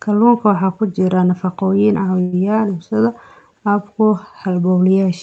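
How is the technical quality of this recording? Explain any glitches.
The speech carries one glitch, a call audio freeze, from 2.21 to 2.34 s. The last sound stretches into a brief fading buzz or hiss. Packets were likely delayed, emptying the jitter buffer. Nothing is lost; the speech simply resumes about 0.11 s late. Throughout, the top end stops near 8 kHz, as expected for this call codec.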